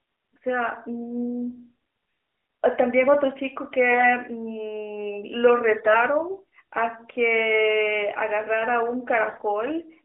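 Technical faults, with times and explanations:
3.90 to 4.15 s, 5.78 to 5.96 s and 9.28 to 9.43 s, AMR bit errors: in these short bursts within the narrowband phone sound, flipped bits in the codec's less protected data misplace the excitation pulses and skew the fine pitch, gain and spectral values. The sound turns hoarse, scratchy and gargly but keeps its rough pitch and level, without the silent gaps of lost frames.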